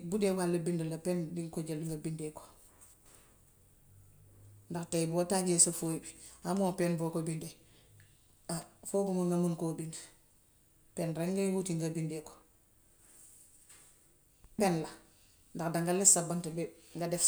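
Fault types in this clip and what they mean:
Electrical switching spike: A sharp snap cuts into the speech at about 8.62 s, over in about 12 milliseconds and sitting on top of the sound rather than replacing it. It is a faint tick, peaking somewhere around -35 dBFS. The likely cause is a nearby switch, motor or static discharge arcing briefly and the audio line picking up that burst of electrical interference.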